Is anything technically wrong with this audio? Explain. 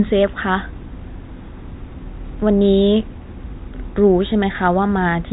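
No, nothing stood out as technically wrong on listening to this speech clip.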